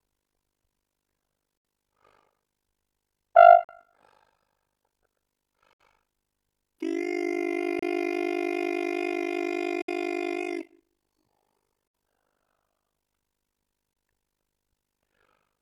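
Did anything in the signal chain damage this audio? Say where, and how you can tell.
Yes: overlap-add ripple runs through the whole clip, a deep, rough tremolo of about 60 dB at around 50 Hz. A frame-based processing or codec stage rebuilt the audio from windowed frames whose overlap doesn't sum flat, so level dips once per frame.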